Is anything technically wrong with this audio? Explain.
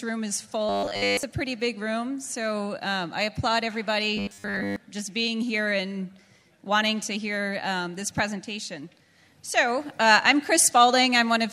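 Yes. From 0.69 to 1.23 s and 4.17 to 4.76 s the audio becomes a rigid 100 Hz robotic buzz, likely from repeated short buffers, roughly 10 ms each, replacing most of the real sound.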